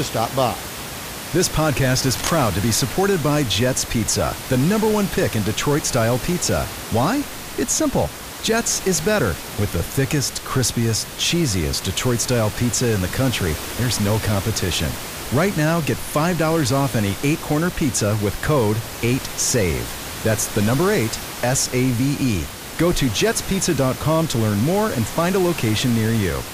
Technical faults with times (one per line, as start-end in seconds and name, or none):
2.10-2.33 cable scratch noise